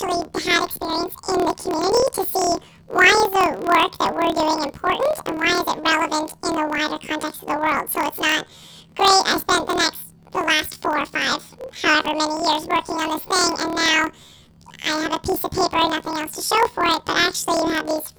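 Throughout the clip, the speech has been hit by planar audio read as interleaved: each 26.12 ms block stores all left-channel samples followed by all right-channel samples, but playback treats them as alternating pairs. Each block's left half and then its right half play squeezed to double speed, 12 semitones up, which keeps the overall pace correct. Because the blocks are this short, the result is a robotic buzz at 38.3 Hz, the block rate, rather than a clear octave shift.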